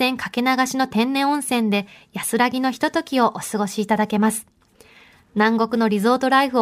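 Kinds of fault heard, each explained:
No kinds of fault are heard in this speech.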